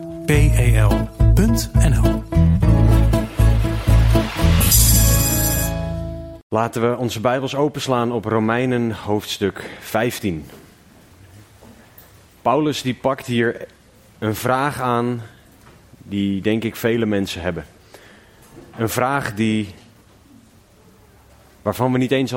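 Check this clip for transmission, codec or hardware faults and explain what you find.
Checking the clip turns up no faults to explain.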